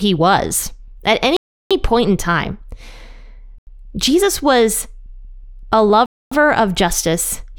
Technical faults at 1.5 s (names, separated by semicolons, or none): block of digital silence